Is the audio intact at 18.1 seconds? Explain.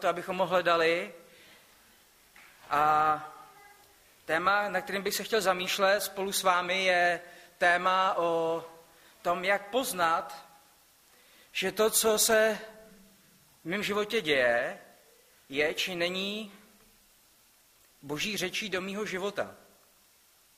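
Yes, the audio is intact at 18.1 seconds, with no dropout, click, distortion or other fault to be heard at that point.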